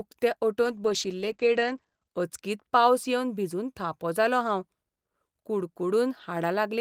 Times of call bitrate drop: 0.64-2.15

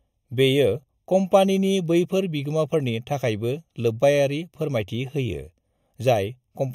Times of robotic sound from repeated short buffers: none

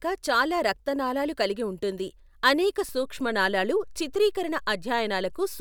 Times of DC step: 2.89-5.61

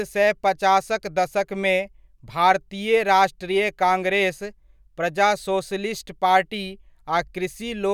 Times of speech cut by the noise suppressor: none

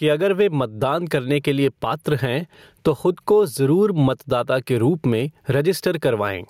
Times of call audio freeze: none

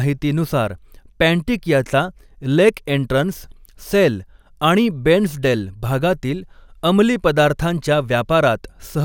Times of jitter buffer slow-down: none

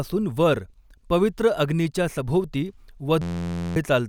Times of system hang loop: 3.22-3.76

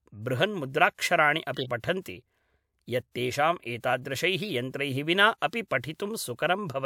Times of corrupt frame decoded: 1.54-1.70, 4.37-4.49

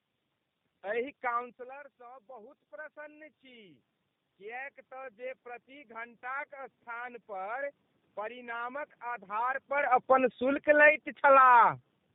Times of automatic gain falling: 9.74-12.06

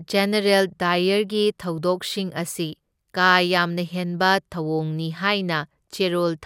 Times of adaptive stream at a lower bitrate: none

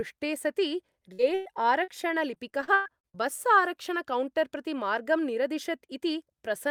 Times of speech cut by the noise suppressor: none

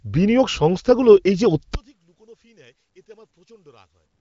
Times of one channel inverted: 1.75-4.20

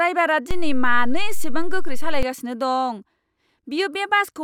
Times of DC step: 0.51-2.23

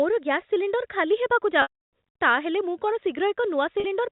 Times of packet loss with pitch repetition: 1.62-1.89, 3.80-3.84

